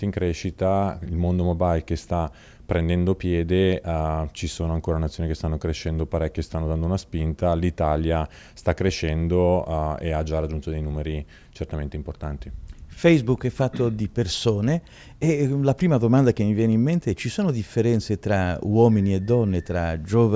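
No technical faults can be heard at any point in the audio, so there is nothing to describe.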